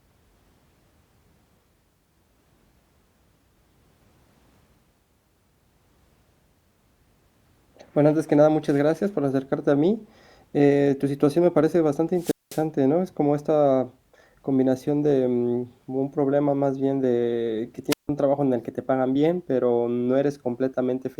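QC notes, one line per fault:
12.16–12.64 s, wireless microphone squelch dropout. Right after "situación me parece bastante", hiss briefly rises as the radio link fades. The receiver's squelch then mutes the output for about 204 ms, leaving near silence before the speech comes back. The squelch gates the audio once signal strength falls too low.
17.90–18.09 s, wireless microphone squelch dropout. After "más bien de que", the same fade, hiss and mute recur, this time for about 163 ms. Speech resumes at "trabajo en el que".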